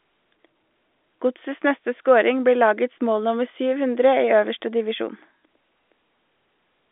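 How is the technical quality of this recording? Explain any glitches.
Nothing stood out on listening to this telephone-band speech recording, so there are no glitches to explain.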